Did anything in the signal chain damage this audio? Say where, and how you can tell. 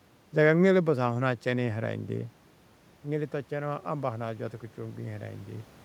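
Yes. Automatic gain rising in call processing: from 3.03 to 5.76 s, after an input drop of about 11 dB, the AGC ramps gain up about 5 dB. The waveform envelope and the spectrogram's noise floor swell together.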